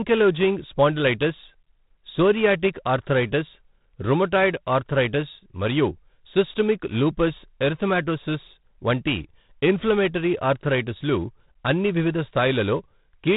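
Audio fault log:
throughout, G.726 ADPCM: the speech has been coded as sample-to-sample differences from an adaptive prediction at very few bits, consistent with the 24 kbit/s mode, leaving a harsh, rasping hiss that rises and falls with the speech level and nothing above 3.8 kHz.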